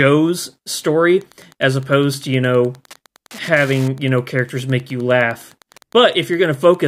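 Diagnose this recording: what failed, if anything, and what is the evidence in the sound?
What failed is the analogue wiring: from 1.11 s to the end there's Wi-Fi interference, a steady tick every 102.4 ms, about ten a second, sitting around 30 dB under the speech. A nearby Wi-Fi radio's beacon is getting into the audio circuit, which rectifies it into audible clicks.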